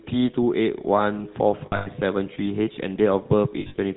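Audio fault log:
throughout: GSM full-rate codec, speech band-limited below 4 kHz with a plainly audible buzzy, gravelly roughness from coarse pulse excitation, consistent with a 13 kbps stream.
1.66–1.88 s and 3.60–3.79 s: lost GSM frames, with about 160 ms and 140 ms of gaps scattered across roughly 200 ms each, and the longest runs lasting up to about a tenth of a second. The decoder repeats the last good frame, producing a brief rough, metallic ringing.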